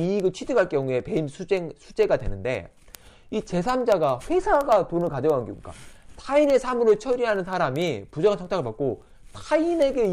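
From 0.14 s to 10.11 s, word clock ticks recur about every 50 ms, around two hundred in all. The receiving clock, unlocked and off by a few hundred parts per million, slips one sample each time. The steady rate distinguishes them from random clicks.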